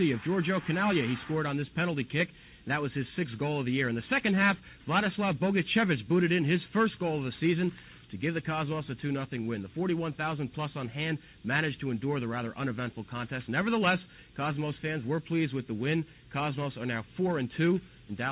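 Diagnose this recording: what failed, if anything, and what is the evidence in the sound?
Nothing failed; no fault can be heard anywhere.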